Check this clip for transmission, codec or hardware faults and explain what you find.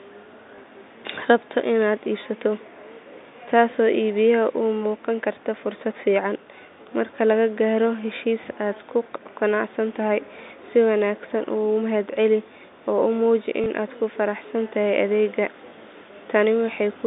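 Two brief dropouts are audible, at 0.56 s and 13.64 s, over a telephone-band G.711 line limited to about 200 Hz to 3.7 kHz. Each is packet loss with the last packet repeated. A 20 ms gap, fitting one packet, is filled by replaying the previous chunk. This causes a small blip.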